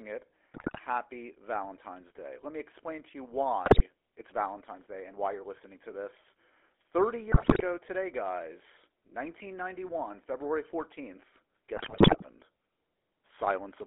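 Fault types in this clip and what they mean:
GSM full-rate codec: The speech was carried by the original GSM coder, which rebuilds the voice from a modelled vocal-tract filter driven by sparse, evenly spaced pulses. Throughout the clip this leaves a plainly audible buzzy, gravelly roughness within a narrow 300 Hz to 3.4 kHz band.
GSM bit errors: Flipped bits from a weak radio link reached the decoder, corrupting filter, pitch and gain values frame by frame. The voice breaks into squawks, pops and gargling at 0.54–0.81 s, just after "me explain to you", just before "today guys", and across 11.76–12.26 s.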